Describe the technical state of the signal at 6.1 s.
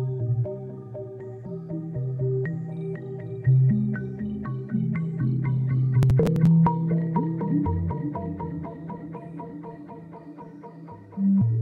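At 6.1 s the processor is overloaded and missing its deadlines for small audio buffers of around 5 ms. Roughly ten are skipped between 6.03 and 6.47 s, each leaving a hard-edged gap, so processor overload crackle tears grittily across the sound.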